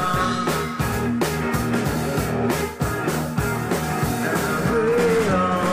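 Two short glitches mark this audio, at 0.91 s and again at 3.07 s, both from damaged data in a compressed stream. Bad bytes there knock the decoder off its frames, so it loses sync and hunts for the next header, leaving a quick blip each time.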